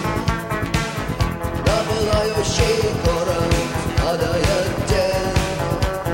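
Nothing goes wrong anywhere in this one; the sound just runs along steadily without a single glitch to point at.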